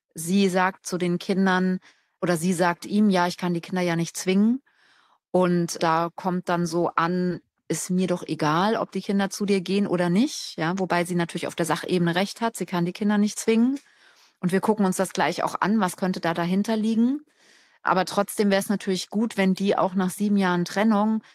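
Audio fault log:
7.31 s, skip ahead: With later audio already waiting, a stretch of roughly 0.7 s of speech was thrown away, either lost on the way or discarded when the jitter buffer overflowed, and nothing was put in its place. Playback lurches forward with no silence or fill, the speech on either side of the jump butting straight together. The missing portion simply never sounds, and the latency drops by about the same amount.
7.43–12.81 s, jitter buffer speed-up: The jitter buffer was holding more audio than its target, so the receiver worked the excess down by repeatedly removing slivers one or a few pitch periods long, taking out around a third of a second in total over these five seconds. The speech plays back at about 106% of normal rate while the pitch stays put, so it comes across as slightly rushed, with syllables crowding together.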